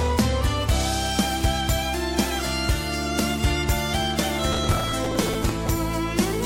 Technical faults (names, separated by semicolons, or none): processor overload crackle